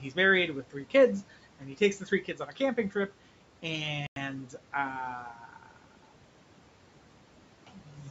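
A speech recording with four stretches of speech cut by the noise suppressor: 1.59 to 1.81 s, 2.0 to 3.1 s, 5.34 to 5.77 s and 7.86 to 7.97 s. In each, the suppressor mistook parts of the speech for background and pulled them down with it. The deepest drops are about 12, 10, 11 and 7 dB. Only brief pieces are hit, a few hundred milliseconds at most per stretch. Those parts sound swallowed and faint. At 4.07 s the sound cuts to silence for 95 ms, then resumes. This is likely a Bluetooth stall. Interference delayed packets, the headphone buffer emptied, and playback waited for the resent data. Nothing is heard above 8 kHz, from the call microphone processing, and room noise sits about 21 dB below the speech.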